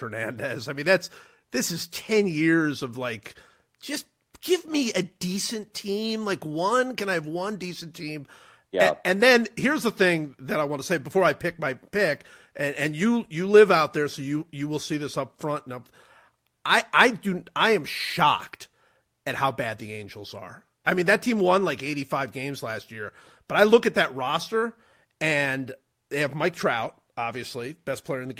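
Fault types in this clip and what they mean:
No dropouts, clicks, distortion or other signal faults can be heard anywhere in this speech recording.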